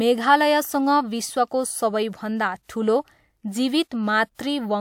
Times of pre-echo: 4.35-4.39

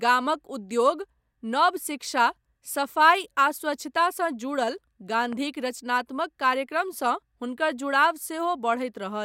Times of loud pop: 5.33-5.35

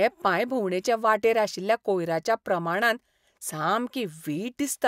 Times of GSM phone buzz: none

